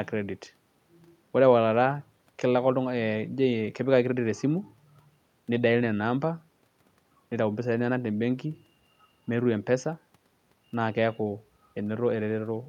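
No technical faults can be heard anywhere in the speech recording, and the signal stays steady and intact across its whole duration.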